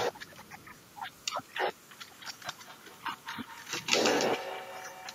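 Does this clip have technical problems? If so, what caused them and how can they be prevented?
Yes. Feedback echo between two devices runs from 2.01 s to the end: speech returns roughly every 200 ms, about 11 dB down, as one device's microphone re-captures the other's playback. Keep only one device active per room, or use headphones.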